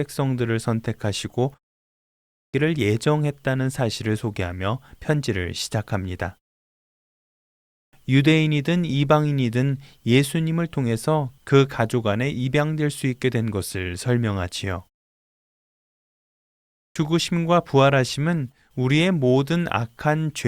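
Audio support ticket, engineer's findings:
Output device sleeping in silence, slow to wake or relock: clipped start after a pause, three times. Speech resumes abruptly, first sounds missing. 1.88 s: about 0.66 s lost after a 0.38 s pause. 7.37 s: about 0.56 s lost after 1.06 s pause. 16.35 s: about 0.61 s lost after 1.54 s pause. Short pauses still trigger it.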